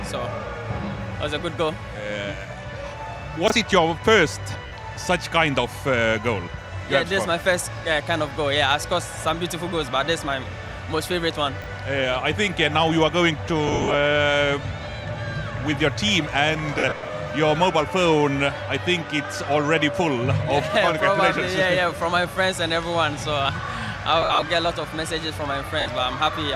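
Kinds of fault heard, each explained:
Chunks out of order: a 20 ms chunk plays one slot late at 3.48 s and 11.62 s, giving a brief jumbled moment at the hard joins.
Lost LE Audio frames: the decoder fills missing frames by reusing the last spectrum with random signs, heard as noisy smears between 4.67 s and 25.9 s.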